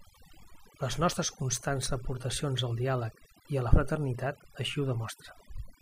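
A short speech recording shows overdone noise removal from start to finish. The denoiser was pushed so hard that any frequency band close to its noise estimate gets cut deep or gated off, taking the softer parts of the voice with it. Pauses drop to near silence speckled with twinkling artefacts. On a spectrogram the gaps look blank except for isolated flickering dots, and the speech harmonics appear patchy and clipped.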